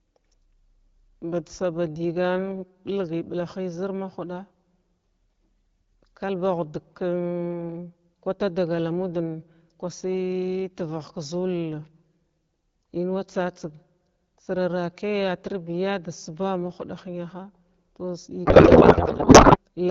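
A speech clip carried over AMR wideband, with a light coding texture that fits a rate of about 12.65 kbit/s. From 18.45 to 19.58 s there is a codec payload misread. The speech turns into garbled noise and warble that barely tracks it. The sound points to octet-aligned AMR frames being unpacked as bandwidth-efficient ones. Every field lands in the wrong place. The garble stops at 19.58 s.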